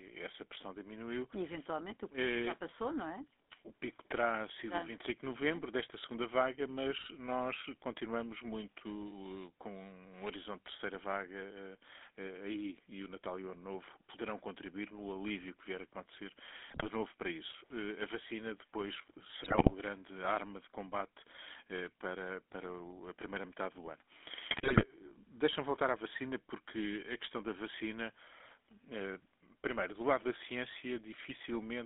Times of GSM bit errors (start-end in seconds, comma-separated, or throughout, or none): 16.68-16.86, 19.44-19.72, 24.50-24.85